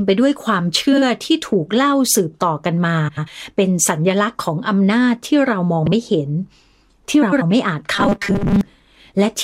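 A speech recording with two kinds of fault. Frames out of order occur at 0.92 to 1.02 s, 3.08 to 3.28 s, 5.85 to 5.92 s and 7.22 to 7.42 s. In each, two adjacent runs of coded audio were decoded in swapped sequence, so the stretch plays with its two halves exchanged. The exchanged blocks are about 46, 93, 60 and 93 ms long. The result is a brief garbled flutter, and no time is lost overall. From 7.94 to 8.61 s the speech becomes a rigid, metallic buzz at 200 Hz that still roughly tracks the syllables. This robotic sound from repeated short buffers is likely caused by audio arriving too seldom, with playback looping a 5 ms buffer to fill the gaps. That loop length sets the fixed pitch, and most of the real audio in that span is skipped.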